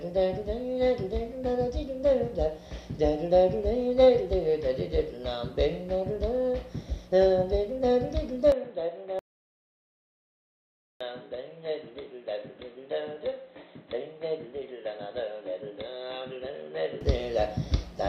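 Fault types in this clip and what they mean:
input switched to a poorer device: at 8.52 s the top end stops at 4.1 kHz, level dips about 5 dB and new background noise appears, likely a different microphone rather than filtering.
audio dropout to silence: from 9.19 to 11.01 s, 1.81 s of silence with no room tone, unlike a gate or fade, likely from a lost input link.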